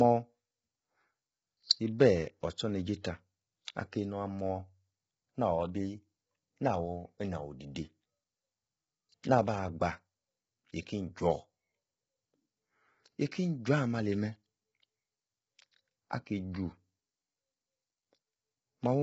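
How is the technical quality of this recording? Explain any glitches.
The technical quality is poor, with heavy coding damage running through the whole recording. The speech sounds rough and grainy, with noise filling the gaps between harmonics and nothing above 7.7 kHz. That's likely low-delay AAC compression (AAC-ELD): its short frames resolve pitch harmonics poorly, which points to a very low bitrate.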